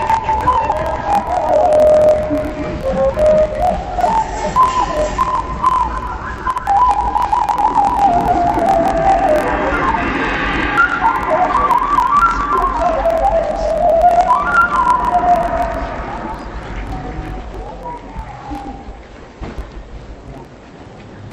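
Throughout the clip, interleaved audio is read as planar. Each 24 ms block of alternating left and right samples is split in half, and each half plays at half speed. The sound drops an octave, doubled and choppy, fluttering at the 41.7 Hz block rate.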